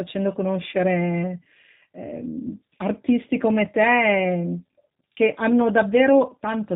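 Throughout, the speech sounds plainly rough, synthetic and dull above 4 kHz: G.729 codec damage, speech rebuilt from a vocal-tract filter and pulses, fitting 8 kbit/s.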